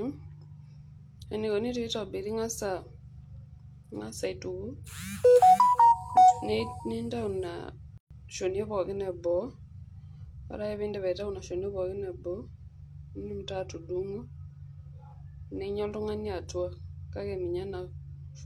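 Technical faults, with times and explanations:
7.98–8.11 s, gap at a join of encoded pieces: separately encoded pieces were joined untrimmed, so encoder start delay and final-frame padding cut a 130 ms gap, its edges smeared by the codec, into the speech.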